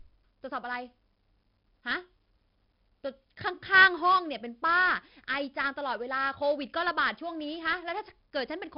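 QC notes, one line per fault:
Throughout, heavy 4-bit ADPCM compression: gritty hiss riding every loud stretch of speech, smeared attacks, nothing above 5.3 kHz, which fits a low-rate, roughly 44 kbps encode.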